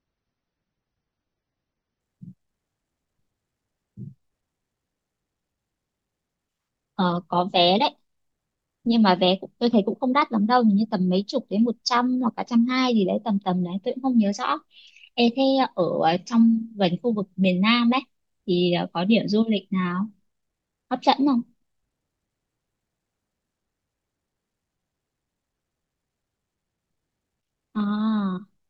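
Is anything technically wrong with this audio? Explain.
Yes. There is an adaptive stream starting at a low bitrate. From 0.0 to 2.0 s the speech sounds dull and smeared, with weak treble, which fits a start near 24 kbit/s. The player switches up once it has measured the connection. The quality then improves abruptly, with no gap, which fits a step to about 96 kbit/s.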